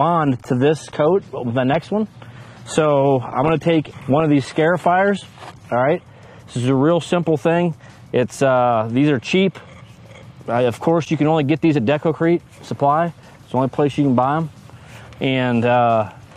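Adaptive stream starting at a low bitrate, 0 to 6.0 s: dull, artefact-heavy sound fitting a 24 kbit/s AAC start, then a sudden, gapless step up suggesting 96 kbit/s.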